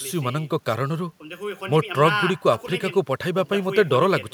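Speech, with no technical faults to report.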